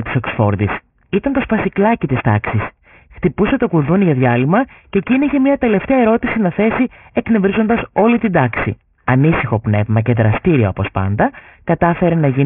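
Right from the start and all the way through, the speech has aliasing: everything above about 3 kHz has folded back down into wrong pitches, which fits a rate drop to around 6 kHz with no filter first. Esses turn gritty and metallic, and the fold-back sits fairly close under the speech level.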